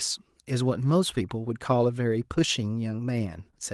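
No technical faults can be heard in this speech.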